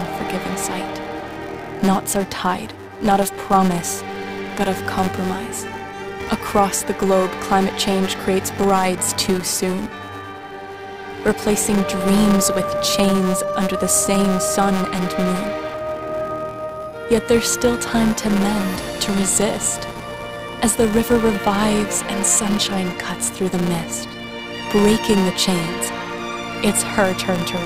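From start to end, a filter restarted on every block: it discards its stored state at each block boundary and begins again from silence. Each restart leaves a small transient, and those transients repeat at 188 Hz, which fits a 256-sample block. The result is a steady buzz running under the audio that rises and falls with the signal's level, louder in busier passages and fading as the sound thins out.

At 15.74 s, damaged data in the compressed stream corrupts a stretch of the encoded frames. The decoder misreads them, loses its place and has to hunt for the next valid frame header before it can continue. This is heard as a single brief squawk or blip.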